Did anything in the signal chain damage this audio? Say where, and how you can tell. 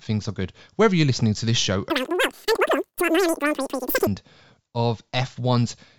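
Yes. The damage is at playback, from 1.90 to 4.07 s, just after "listening to this show." This is a wrong sample rate fault. The speech jumps up about 17.6 semitones and runs 2.76 times too fast. That fits 16 kHz audio played at 44.1 kHz without conversion.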